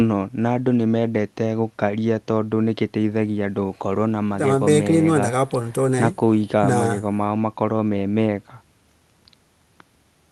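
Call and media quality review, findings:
No faults found in this clip.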